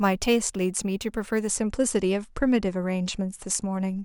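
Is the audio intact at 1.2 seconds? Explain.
No. From 0.0 to 1.5 s the speech carries crude rate conversion: a 32 to 48 kHz change made by repeating nearest samples, unfiltered. That adds an inharmonic fizz about 20 dB down; the waveform shows stair-stepped duplicate samples, the spectrogram mirrored, non-harmonic lines.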